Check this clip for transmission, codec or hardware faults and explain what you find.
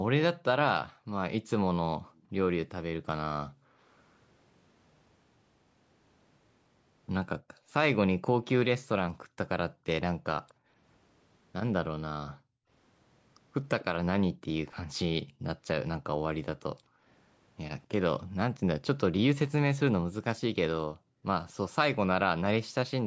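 Two faults stand out in this speech, both tied to echo cancellation on a call.

Background gated by the echo canceller, within 0.9–3.8 s, 7.45–17.07 s and 20.92–21.24 s: while the far end's audio played through the loudspeaker, the canceller clamped the microphone down by as much as about 40 dB. The room sound briefly drops away, for under a second in the first stretch, roughly a second and a half across the second, and a short dip in the third.

Echo leak, at 2.15–2.67 s and 8.47–10.54 s: a faint delayed copy of the speech trails about 246 ms behind, very quiet in the first instance and slightly stronger in the second. This is likely residual loudspeaker sound the canceller failed to remove and sent back. The call's normal microphone processing is also present, with nothing above 8 kHz.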